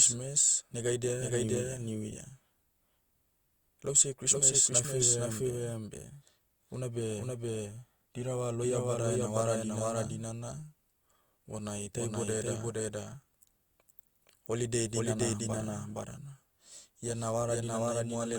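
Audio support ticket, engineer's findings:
Doubled audio track, whole clip. Likely a second capture path or misaligned edit mixing the same speech in twice. Copy runs about half a second behind the original, at roughly equal level, full-band, with no decay or room colour. Result: every phrase repeats cleanly after the first, two overlapping streams of speech throughout, reads as a hard echo rather than reverb. Check for duplicate input routing or a stacked edit.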